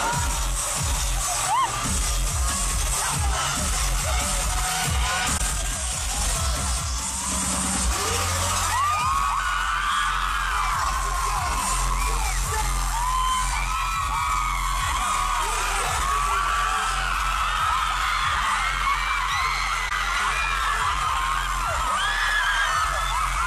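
The audio has two brief damaged spots, at 5.37–5.41 s and 19.88–19.92 s, each roughly 35 ms and consistent with a single AAC frame. These are corrupt frames concealed: the decoder detected damaged bits and muted or smeared the frame rather than producing a squeak.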